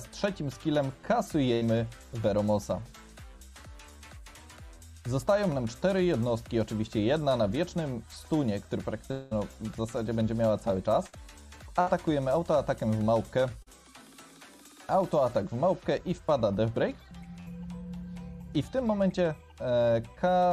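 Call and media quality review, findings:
Burst of packet loss at 1.53–1.63 s: roughly 80 ms gone. The last sound gets stretched into a fading buzz or hiss, then jumps ahead. Jitter buffer/network, concealment covering the hole.

Same burst of packet loss at 11.07–11.15 s, 11.81–11.88 s and 17.40–17.48 s, about 60 ms each. Shorter held tail, same skip forward. The two at 11 s sit close together, so the link was probably choppy around then.

Long network dropout at 9.11–9.33 s: about 200 ms missing. Concealment holds the last sound as a decaying buzz/hiss across the whole stretch with no true silence, then playback picks up further along. Likely an upstream network stall, not the decoder.

Short concealed packet loss at 13.62–13.68 s: about 40 ms lost. It comes through as a quick smear or wobble where the decoder extrapolated and blended back in. Minor, but a brief sound in there could have vanished.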